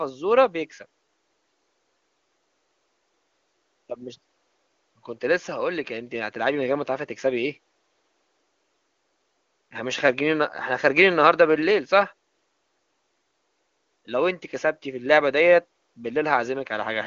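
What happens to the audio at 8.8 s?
Nothing goes wrong at 8.8 s; the speech there is intact, with only the faint room noise well below it and the band-limited but clean sound of the AMR wideband link.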